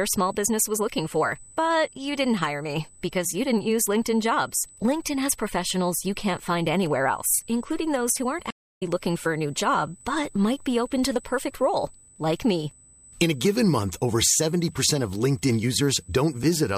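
The recording is speech. Current drawn by the USB bus in its 125-microsecond microframes is leaking into the audio through power or ground, so a steady whine at a fixed 8 kHz runs under the entire clip, sitting about 25 dB below the speech. At 8.50 s, a stream reconnect occurs. The connection dropped after "including those who aren't," and the player went quiet for about 0.25 s before rejoining the stream with a fresh decoder. The audio picks up at "looking for a new" around 8.83 s, landing roughly 0.3 s further along than where it broke off, so that stretch of speech is simply missing.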